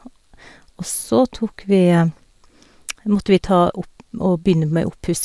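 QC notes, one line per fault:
No faults turned up anywhere in this speech recording.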